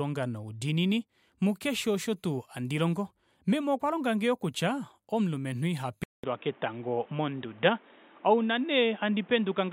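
At 6.04 s, right after "longange yoo kutya omulumenhu", the speech drops out for about 200 ms and returns dull and boxy, with nothing above 3.8 kHz, until the end. The likely cause is an input switched to a poorer device. Loudness stays the same, but a different background noise, around 30 dB below the speech, arrives with the band loss. That noise change, together with the gap, separates a device change from a simple low-pass filter or codec bandwidth drop.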